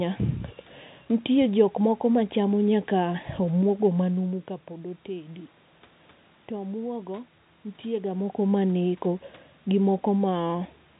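No technical faults are audible.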